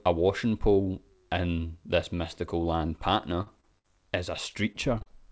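Right after "in this mystical land", at 3.42 to 3.48 s, a burst of packet loss hits: consecutive packets fail to arrive in time, so the receiver stretches the last sound for about 45 ms while fading it. The audio then resumes roughly 40 ms further on, leaving an audible jump. Between 3.60 and 3.73 s, a short concealed packet loss fills a hole of about 28 ms by continuing the preceding sound before blending back, heard as a brief smear with a sliver of audio gone. At 3.79 to 3.86 s a second burst of packet loss extends the last sound by about 54 ms and skips about 60 ms. From 4.5 to 5.08 s, repeated packet loss opens four gaps, the longest 32 ms. Patching leaves about 17% of that stretch synthetic, so it turns choppy and robotic.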